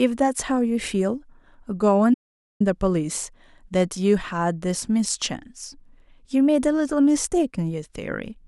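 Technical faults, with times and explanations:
2.14 to 2.60 s, audio dropout to silence: the speech stops abruptly and about 0.46 s of silence follows, with even the room tone vanishing, before the sound returns mid-flow. The likely cause is the input being lost while recording carried on writing silence. Unlike a natural pause or a noise gate, the background doesn't fade or duck; it vanishes completely, and whatever was said there is missing.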